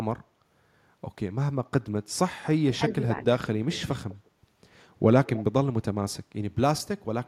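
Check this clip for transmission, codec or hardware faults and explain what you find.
Two faults show up, both tied to hands-free echo control. Speech suppressed in double talk occurs at 2.77–2.81 s and 2.97–3.02 s: the voice dips by roughly 15 dB, then by about 5 dB. Each lasts 40–50 ms, most likely because the echo canceller gated the near talker while far-end audio was present.

Echo leak appears at 2.94–3.24 s, 3.72–4.29 s and 5.25–5.44 s as a faint copy of the speech trailing by 200 ms. It sits at about −20 dB in the first two stretches and about −15 dB in the last. Likely cause: loudspeaker pickup that the far end's canceller failed to fully remove and sent back.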